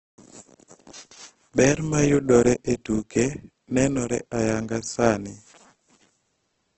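Throughout the speech, the sound is rough and grainy, with nothing above 8.2 kHz, which points to heavy Opus compression, likely in CELT mode near 12 kbps. Starved bands are filled with noise rather than left empty, so tones turn coarse without MP3's swirling holes.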